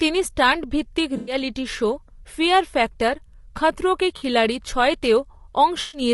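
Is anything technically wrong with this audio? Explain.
Yes. Throughout the speech, the voice sounds rough and grainy, with a hiss filling the gaps between harmonics and a thin, somewhat synthetic top end. This is likely low-delay AAC compression (AAC-ELD) at a bitrate that fits around 32 kbps. Its very short frames give coarse pitch resolution and consume bits quickly, so the encoder leaves noise between harmonics and rebuilds the upper band only approximately.

There is also AAC frame loss with concealment in three places. From 1.17 to 1.35 s, just after "স্টান্ট ভিত্তিক" and before "শো ফিয়ার ফ্যাক্টর খাতরোঁ", about 100 ms turns smeared and noisy. A shorter 40 ms phasey blur follows at 4.17 to 4.23 s, right after "ফিয়ার ফ্যাক্টর খাতরোঁ কে". A 120 ms patch at 5.81 to 6.01 s sounds the same way. In each, the decoder stood in for missing frames with material built from the last good spectrum, which produces that noisy, washed-out texture.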